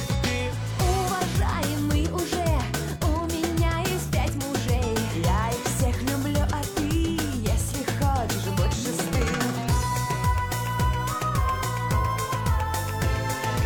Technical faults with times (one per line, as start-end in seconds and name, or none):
none